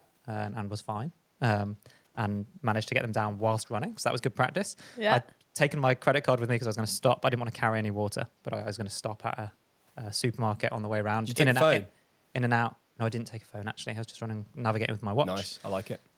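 In the first 0.07 s, a very faint delayed copy of the speech, roughly 40 dB below it and trailing by about 208 ms, flickers and vanishes. This is likely an echo leak: a loudspeaker's output reached the far microphone, and the echo canceller let a scrap of it back down the line.

At 5.33 s the room sound briefly sinks by about 11 dB for around 150 ms before recovering, and again at 16.01 s, running to the end. This is background gated by the echo canceller, which clamped the microphone down while the loudspeaker was playing.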